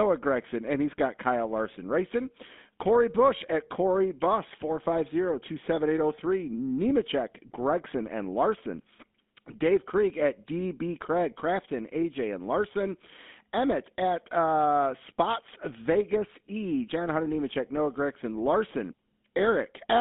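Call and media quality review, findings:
GSM full-rate codec artefacts, whole clip: buzzy, gravelly roughness on speech, plainly audible. Band limited to roughly 200 Hz–3.6 kHz. Probable component: legacy GSM leg in call path, consistent with 13 kbps full-rate coding. Pulse-train excitation with sparse samples causes rasp.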